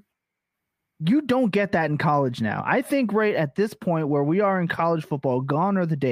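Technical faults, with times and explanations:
No technical faults can be heard in this speech.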